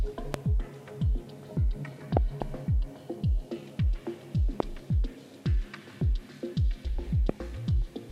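Loud pops occur at 0.34 to 0.36 s, 2.17 to 2.44 s, 4.60 to 4.62 s and 7.29 to 7.31 s, each jumping around 20 dB above the surrounding level. The one at 2.17 s is a double, two pops in quick succession. Each is a short, sharp spike riding on top of the sound, which continues underneath. They are likely voltage transients from a plug, switch, static discharge or driver glitch, which the downstream circuitry rounds into brief thumps.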